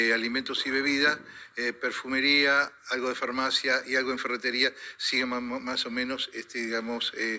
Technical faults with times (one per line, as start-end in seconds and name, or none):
none